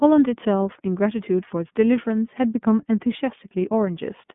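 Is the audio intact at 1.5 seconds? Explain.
No. At 1.5 seconds, as across the whole clip, the iLBC codec is heard. Each short frame, consistent with 30 ms blocks at about 13.33 kbps, is coded independently, so the speech sounds plainly rough and synthetic, confined to roughly 150 Hz to 3.5 kHz with nothing above 3.8 kHz.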